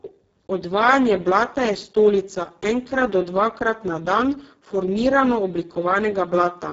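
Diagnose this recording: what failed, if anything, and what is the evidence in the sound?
Codec stage: Speex at a starved setting. Throughout, the speech sounds hoarse and robotic, with nothing above 7.7 kHz, consistent with a very low bitrate near 6 kbps.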